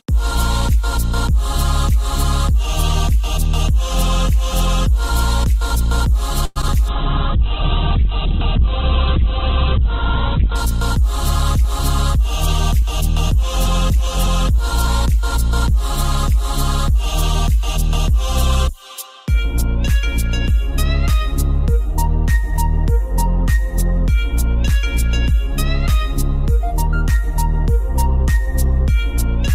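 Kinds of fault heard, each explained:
Call audio freeze: from 6.45 to 6.58 s the sound stalls for about 100 ms, the last fragment stretched into a fading buzz or hiss, then resumes where it stopped with nothing lost. This is likely a jitter buffer running dry while packets were held up in transit.
Short concealed packet loss: at 6.62 and 6.68 s roughly 20 ms of audio never arrived in time, and the receiver bridged each hole by extrapolating the preceding sound before crossfading back, leaving two brief smears just after the freeze.
Call bitrate drop: from 6.89 to 10.63 s the encoder rate falls from 48 to 7 kbps, bottoming out for about 3.6 s, and the audio bandwidth narrows from 20 kHz to 4 kHz, so the sound turns muffled, coarse and watery until the rate recovers.
Jitter buffer speed-up: from 11.16 to 12.35 s and again from 12.82 to 14.88 s the receiver trims surplus buffered audio by dropping short pitch-period slices, running about 2 to 3 percent fast at unchanged pitch and removing a few tens of milliseconds each time.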